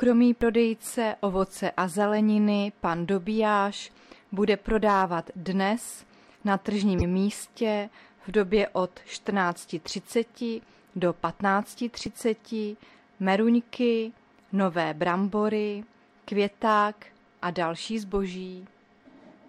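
At 6.98 s there's a corrupt frame decoded, lasting about 50 ms to 7.03 s. Flipped bits in what sounds like a couple of compressed frames got played anyway, so energy lands at wrong frequencies, giving a chirp, squeak, blip or burst of noise with the error peaking near -10 dBFS.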